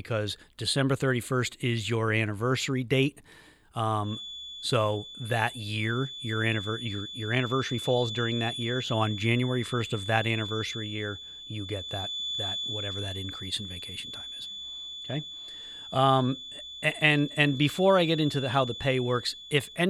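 From 3.98 s to the end of the speech, a feedback whistle sits at 3.5 kHz, roughly 10 dB below the talker. The loudspeaker-to-microphone loop was likely held just short of instability, so this one frequency sustains without building. Unlike a runaway howl, it never builds into a howl, only swelling and fading slowly in level. Unlike mains hum or a test tone, it is a single thin, high pitch whose level drifts rather than staying fixed.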